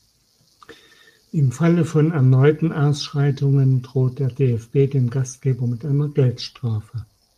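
No technical faults can be heard anywhere in the speech.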